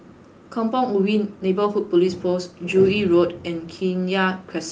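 No faults found in this speech; the top end stops at about 12 kHz, which fits an Opus call path at roughly 32 kbps.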